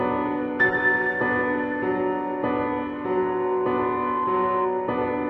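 The audio carries a loudspeaker feedback squeal from 2.91 s to 4.73 s. A single tone at 1 kHz rises out of the sound. It swells over roughly one and a half seconds. It ends up about as loud as the audio itself. The cause is a closed acoustic loop. A microphone is hearing the loudspeaker it drives. At 1 kHz the loop gain passes one, so that frequency feeds on itself and keeps growing.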